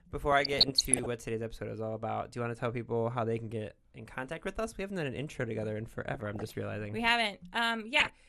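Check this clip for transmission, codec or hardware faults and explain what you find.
Yes, the clip has two faults: plainly audible codec damage throughout, and three bursts of reception errors on top of it.

MP2 compression, throughout the speech: the dull, granular, gurgling texture is likely from MPEG Layer II coding at a low rate, around 80 kbps. Short of bits, the encoder shuts off upper sub-bands and coarsely quantises the rest, so the top end flickers and sounds muffled.

DAB burbling, at 0.32–1.06 s, ending just before "what today's episode is", at 6.14–6.53 s between "an intro together in" and "realizing we", and at 7.93–8.10 s: bit errors slip past error correction into the audio frames, corrupting samples. Wrong samples then put short blips of noise into single sub-bands.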